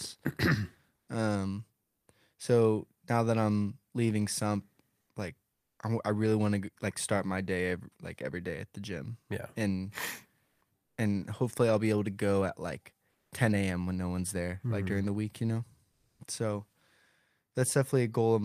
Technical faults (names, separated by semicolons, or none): comfort noise in place of the background